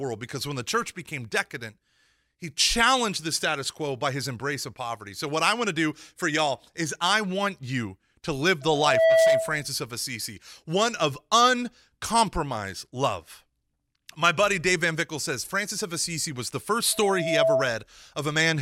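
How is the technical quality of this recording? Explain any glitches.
The speech is marred by loudspeaker feedback squeal, twice. It runs from 8.61 to 9.68 s and again from 16.92 to 17.78 s. A microphone is picking up the loudspeaker it feeds. At 653 Hz the loop gain tops one, so that tone feeds itself and grows. It swells over roughly 0.4 s the first time and 0.5 s the second into a steady squeal. The first peaks around 10 dB above the speech, the second around 5 dB.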